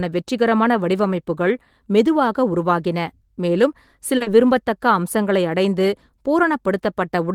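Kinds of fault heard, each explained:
Short stall from a late packet: a packet arrived late, so the jitter buffer ran dry and the receiver held the last sound for about 30 ms before resuming where it left off. Near 4.17 s one sound is drawn out slightly too long, with nothing lost.
Short concealed packet loss: about 40 ms of audio from 4.22 s to 4.28 s never reached the decoder in time. The receiver extended the preceding sound to cover the gap and blended back in, leaving a brief smear where real speech is missing.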